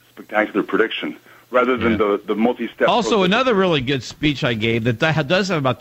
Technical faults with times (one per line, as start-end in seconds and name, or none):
3.27 dropped samples